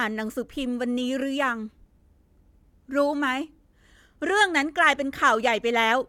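No technical faults can be heard anywhere in this recording.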